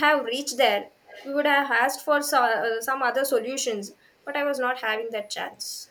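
Speech suppressed in double talk at 0.89 to 0.99 s: the speech briefly drops away by around 20 dB for about a tenth of a second. The likely cause is an echo canceller that heard both ends talking at once, could not tell this talker from the loudspeaker echo, and turned everything down.

Echo leak from 1.05 to 1.32 s: a faint copy of the speech trails about 231 ms behind, sitting well below the direct sound, roughly 25 dB down. This is likely a far-end loudspeaker whose echo canceller let part of the microphone pickup through and sent it back.

Speech suppressed in double talk returns at 5.49 to 5.81 s, a longer dip of about 0.3 s with a similar drop of around 20 dB.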